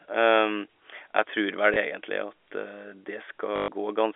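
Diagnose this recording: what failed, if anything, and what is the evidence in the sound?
Network: packet loss, last packet repeated. Small blip at 1.74 s. 120 ms robotic stutter at 3.56–3.68 s, buzzing at 50 Hz, fitting 20 ms packets.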